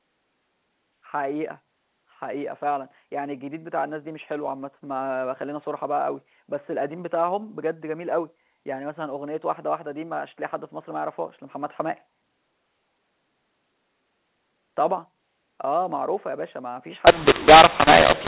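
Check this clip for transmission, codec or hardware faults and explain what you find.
One codec fault appears near the end of the speech. The rest of the clip carries the narrow, telephone-band sound of G.711 A-law at 8 kHz.

From 17.07 s to the end of the clip, mu-law and A-law are mixed up. The audio was coded as A-law but decoded as mu-law. The two laws map their 8-bit codes to amplitudes along different curves, so every sample comes back at the wrong level. Some levels come out too large and others too small. The speech turns harsh and distorted. Near-silent moments fill with hiss, because low codes now decode well above zero.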